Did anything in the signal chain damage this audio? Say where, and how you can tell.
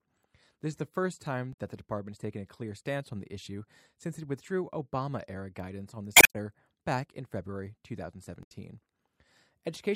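Yes, damaged data in a compressed stream at the codec stage: brief glitches at 1.53–1.57 s, 6.13–6.36 s and 8.43–8.52 s in the speech. Corrupted bytes made the decoder misread frames, lose sync and hunt for the next valid header.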